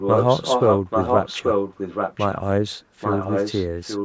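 From 0.0 to 2.37 s, the speech returns about 0.83 s later, roughly as loud as the original. This is an echo leak, likely a loudspeaker's echo canceller passing its own playback back. From 3.0 s to the end, it recurs, somewhat quieter.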